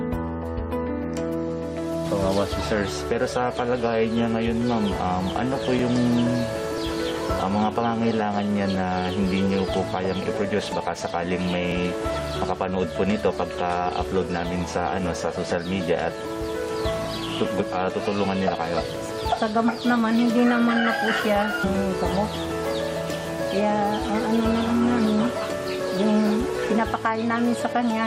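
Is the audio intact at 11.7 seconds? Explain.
No, not quite. At 11.7 seconds you're right at the tail end of a run of periodic USB or driver dropouts that starts around 5.79 s and ends near 11.72 s. Something on the system is stalling the USB bus or audio driver every 0.99 s, and each time around ten milliseconds of audio simply gets skipped. That's about seven losses in all, heard as a steady string of ticks or pops about once a second.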